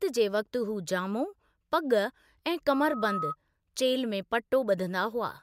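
A microphone picked up its own loudspeaker, tipping the loop into loudspeaker feedback squeal: from 2.69 to 3.36 s a 1.3 kHz tone swells over a few tenths of a second to roughly speech level.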